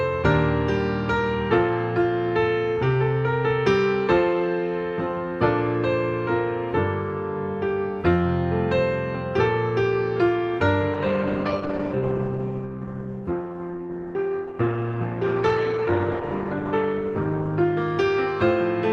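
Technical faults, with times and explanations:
10.95 to 18.83 s, call bitrate drop: the bandwidth estimate fell and the encoder was throttled, consistent with roughly 48 down to 12 kbps. Coarser coding roughens the sound, and the top end narrows from 20 kHz to 12 kHz, bottoming out for 5.81 s.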